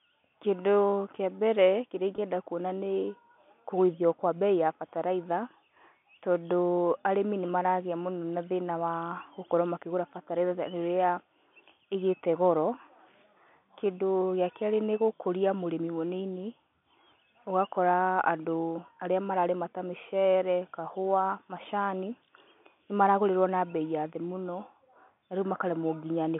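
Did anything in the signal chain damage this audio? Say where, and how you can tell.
Yes. At the network stage, a single packet went missing at 2.16 s, leaving a gap of 20 ms. This is packet loss with pitch repetition. The receiver filled the hole by repeating the last pitch period and letting it decay. With so short a loss, the result is a brief held, slightly buzzy tone rather than silence. The sound then resumes almost at once. The G.711 telephone coding holds the audio to a narrow telephone band, without adding damage of its own.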